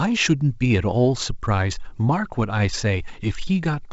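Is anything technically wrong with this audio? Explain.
No, nothing is technically wrong with this audio.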